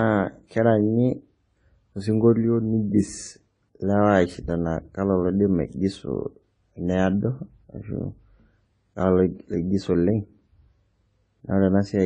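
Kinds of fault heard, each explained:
Transcoding between lossy codecs: the speech has two layers of compression damage stacked on top of each other, most likely a low-rate AAC encode, somewhere around 24 kbit/s, later re-encoded to MP3 at roughly 48 kbit/s. The second encoder wastes bits reproducing the first one's artefacts, then adds its own artefacts, so both kinds come through together. Nothing survives above 10 kHz either, since the narrowest band limit in the chain carries through.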